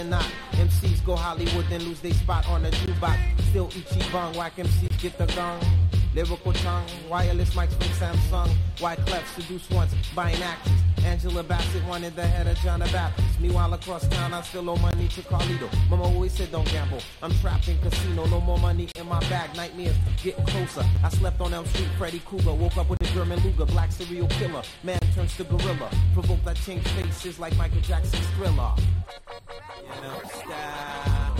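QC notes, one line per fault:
2.86, 4.88, 14.91, 18.92, 20.96, 22.97, 24.99, 27.02 s: gap between stream segments. Silent holes of 10 to 35 ms sit where two-second segment timestamps don't meet. They appear as hard-edged flat-line breaks on the waveform and blank vertical stripes on the spectrogram.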